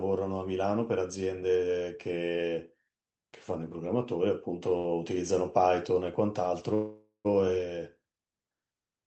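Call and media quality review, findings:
Short stall from a late packet, 4.77–4.86 s: sound held about 70 ms too long, slight buzz. Jitter buffer underrun; receiver stretched the last frame until the packet arrived, then resumed in place with nothing lost. Spectrogram: the preceding harmonics smeared flat horizontally. Waveform: brief repetitive stretch with a small envelope dip.

Call audio freeze, 6.74–7.27 s: playback stalls about 0.5 s, likely from packets held up in the network draining the jitter buffer. The last sound continues as a fading buzz, then about 0.14 s of silence, and resumes where it stopped. Nothing is missing; the rest of the clip plays about 0.57 s late. Spectrogram: a decaying smear into a blank column. Waveform: a shrinking tail, then a flat line. The call path band-limits the audio to about 8 kHz.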